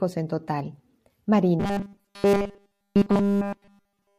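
From 1.6 s to the end at 4.19 s, the speech takes on a robotic sound from repeated short buffers. The audio has become a rigid, metallic buzz pitched at 200 Hz that only loosely tracks the words. The likely cause is new audio arriving too slowly, so playback fills the gaps by looping a 5 ms buffer, and that loop length sets the 200 Hz pitch. Essentially all of this stretch is repeated material rather than fresh audio.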